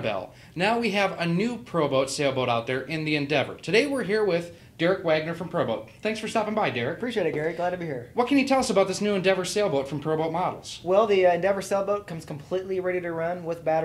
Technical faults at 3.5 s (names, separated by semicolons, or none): compressed frames skipped